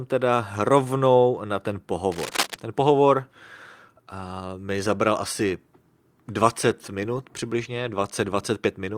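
A worn cable or connector likely shifted in this speech recording, and its contact resistance jumped about, producing cable scratch noise: rough, uneven rustling from 2.12 to 2.54 s, just after "rovnou na ten", only a few decibels below the speech.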